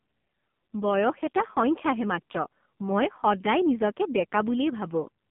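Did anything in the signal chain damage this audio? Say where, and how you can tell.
Yes, the codec stage did it: this speech went through the AMR narrowband mobile codec for the whole clip, heavily degraded. Nothing above 3.6 kHz comes through, and the voice sounds buzzy and synthetic, like what a low rate near 5.9 kbps would give, where a few excitation pulses per subframe drive a vocal-tract model.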